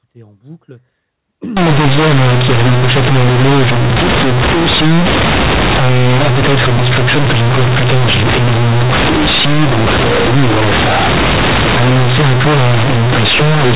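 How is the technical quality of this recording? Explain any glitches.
The technical quality is poor. From 1.57 s to the end of the clip, the audio suffers from companded audio read as linear. The first part carries the narrow, telephone-style sound of A-law G.711 telephone coding, with nothing above 4 kHz. After that point the A-law bytes are handed to the output as plain linear 8-bit samples, with no expansion back to a linear scale. The logarithmic codes no longer map to their proper levels, and every sign change throws the waveform across roughly half the output range. Quiet passages become as loud as peaks, so the speech turns into harsh, very loud buzzing distortion, and the pauses fill with strong noise instead of falling silent.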